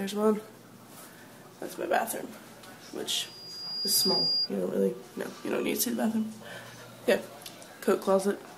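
From 3.23 to 4.50 s a loudspeaker feedback squeal rises at 4.8 kHz. The microphone was re-amplifying its own speaker output, so that frequency grew over roughly 0.7 s to about 5 dB above the programme. A spectrogram shows one bright horizontal line, and the waveform envelope swells.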